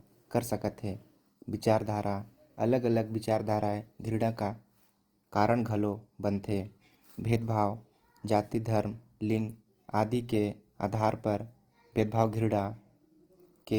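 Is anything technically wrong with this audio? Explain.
Yes. Throughout the speech, the sound is rough and grainy, with a noisy texture even though the top end reaches about 20.2 kHz. This is likely Opus compression in its CELT music mode, filling starved bands with folded or noise content, consistent with a low bitrate near 24 kbps.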